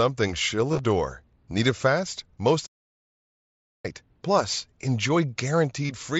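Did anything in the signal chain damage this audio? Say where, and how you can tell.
Yes. Concealed Bluetooth headset packet loss on the headset-to-phone link at 0.72 to 0.79 s and 5.85 to 5.90 s. The missing stretches are filled with repeated waveform, heard as a brief buzzy hold rather than silence.

A playback stall at 2.66 s, just after "it fast": output goes fully silent for about 1.18 s, then resumes at 3.85 s. Unlike concealment, nothing fills the gap, which points to the player likely being starved of data or blocked.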